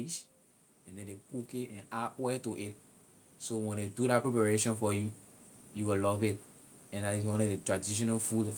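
A speech clip with automatic gain rising from 3.49 to 5.21 s, just before "you will love it": the gain control lifts voice and background together by about 5 dB, seen as a waveform envelope and noise floor that widen steadily.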